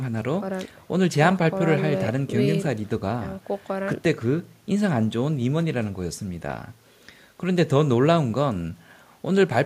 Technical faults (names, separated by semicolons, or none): none